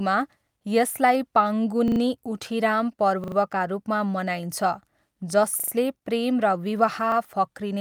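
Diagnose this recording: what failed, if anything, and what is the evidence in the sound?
The playback buffer is underrunning, giving a repeated buffer. A 40 ms chunk stutters from 1.88 to 2.00, 3.24 to 3.36 and 5.60 to 5.72 s, replayed three extra times each, plus one extra repeat at 7.12 to 7.16 s. Each repeat has a hard join, and no speech seems lost.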